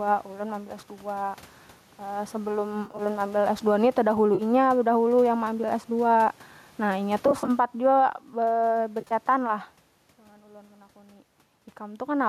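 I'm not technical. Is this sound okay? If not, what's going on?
No. Gain pumping runs through the whole clip: the speech sounds squashed. The likely cause is the microphone level set far too high, with an automatic limiter pulling it down on each loud sound.

AAC frame loss with concealment hits four times: 2.85 to 3.02 s, 4.35 to 4.42 s just before "bedahulu yang meambil", 7.28 to 7.50 s just after "nah inya", and 9.01 to 9.12 s. Small chunks of the stream went missing, and the decoder patched each gap by guessing from the sound just before it, so each spot briefly turns smeared and noisy.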